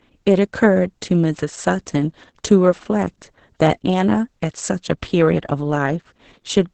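Opus voice compression runs through the whole clip. The speech sounds muffled, hoarse and slightly robotic. Nothing lies above about 8.6 kHz, typical of wideband SILK coding. The excitation is coarsely coded, and the heavy damage points to roughly 10 kbps.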